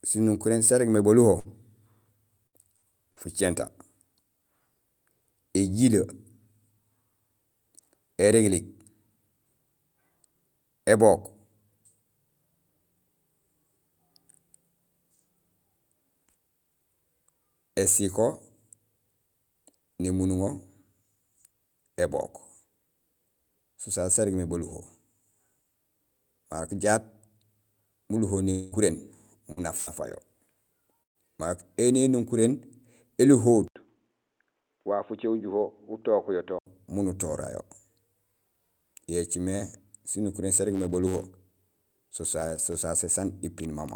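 From 1.39 to 3.19 s there is repeated packet loss, with a robotic sound. Four short holes, the longest 58 ms and about 220 ms in all, are each bridged by extending the preceding sound. About 12% of the stretch is synthetic, so the audio turns choppy and robotic, with fragments missing.

From 28.51 to 28.75 s about 220 ms of audio is gone. The last sound is stretched into a fading buzz rather than silence, and the audio resumes without the lost part. This is likely a long network dropout. At 28.72 s one 20 ms frame is a lost packet rebuilt from error correction: a low-bitrate copy carried in the next packet. It sounds rougher and noisier, with no gap.

Two bursts of packet loss follow, at 29.52 to 29.60 s (40 ms missing) and 29.77 to 29.90 s (100 ms missing). Each is concealed by holding the last sound and letting it decay into buzz or hiss, and the audio resumes further on. Rebuilt-frame roughness recurs at 29.57 and 29.87 s. 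A third burst, at 31.03 to 31.18 s, loses 120 ms, and the concealment fades to near-silence for 110 ms before the audio returns.

From 33.68 to 36.67 s the sound turns dull and band-limited. It is a few decibels quieter, carries its own faint noise floor, and opens with an 80 ms silence. This points to the input likely having been switched to a poorer device.

From 40.65 to 42.85 s a filter restarted on every block adds a transient at each block start. This produces a buzz at 93.8 Hz whose strength follows the signal level, which fits a filter being reset on every 512-sample block.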